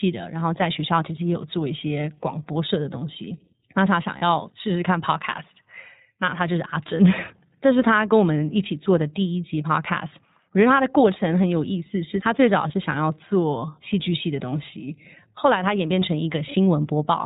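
Throughout, the speech carries iLBC codec damage: nothing above 4 kHz, and a plainly rough, synthetic edge to the voice. The character points to iLBC's 15.2 kbps mode with 20 ms frames. Unlike a simple low-pass filter, it also roughens the texture.

At 4.18 s and 12.68 s, lost iLBC frames leave gaps of 40 ms and 20 ms. The decoder bridges each gap by repeating the last pitch cycle with noise, giving a brief held, buzzy vowel rather than silence or a click. Clarity returns immediately afterwards.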